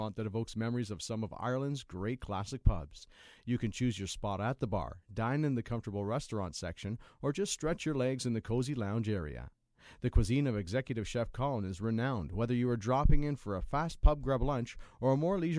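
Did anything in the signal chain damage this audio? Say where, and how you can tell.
No, nothing in the signal chain audibly damaged this speech recording. No stage shows a problem that can be heard at any point in the clip.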